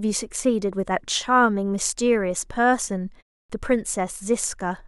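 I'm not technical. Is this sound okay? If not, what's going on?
No. At 3.44 s, after a 0.3 s pause, the first 56 ms of speech are cut off. This is a clipped start after a pause: the device woke too late, losing speech itself, not just background.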